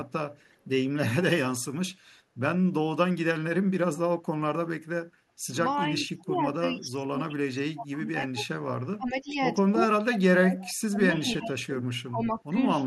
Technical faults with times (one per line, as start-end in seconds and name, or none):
0.52-0.56 echo leak
5.80-8.42 speech suppressed in double talk
8.97-9.37 speech suppressed in double talk
9.99-10.56 speech suppressed in double talk
10.61-10.74 echo leak
10.88-11.75 speech suppressed in double talk
12.09-12.55 speech suppressed in double talk